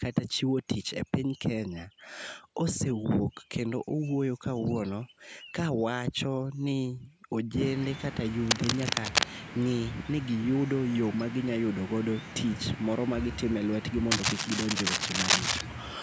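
From 8.46 to 9.24 s and again from 14.11 to 15.62 s, a cable scratch noise rasps over the speech at roughly the same loudness as the talker. It is likely a worn lead or connector being moved, its contact resistance flickering. On the waveform these stretches show ragged, irregular spikes. The spectrogram shows scattered broadband speckle reaching up to the 8 kHz ceiling set by the call microphone processing.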